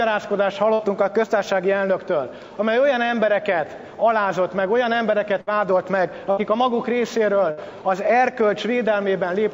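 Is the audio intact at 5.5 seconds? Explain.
No. A burst of packet loss runs from 5.41 to 5.50 s. About 60 ms of audio never arrived in time. The receiver filled the gap by stretching the last sound and fading it down. Playback then resumes further on, with that stretch missing.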